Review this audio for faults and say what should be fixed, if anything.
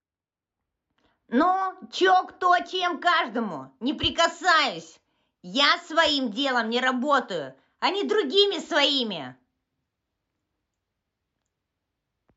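From 0.0 to 3.5 s, de-emphasis was applied wrongly: a treble-cutting filter meant to reverse pre-emphasis hit speech that had none or was applied twice, tilting the response down to about 13 dB lower at 10 kHz than at 1 kHz. The speech there sounds dull and muffled. Prevent it by checking each source's emphasis flag before enabling a de-emphasis stage.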